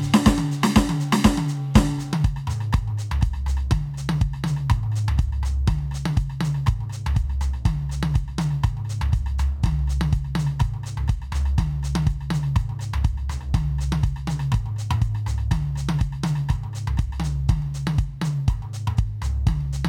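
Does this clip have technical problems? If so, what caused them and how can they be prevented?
No, this music clip has no technical problems, so there is nothing to trace to a cause or prevent.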